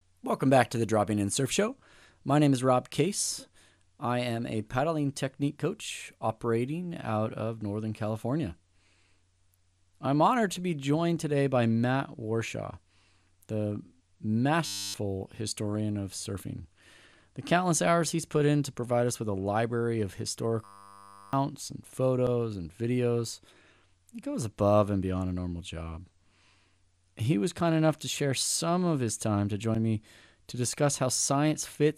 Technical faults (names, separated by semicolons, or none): system hang loop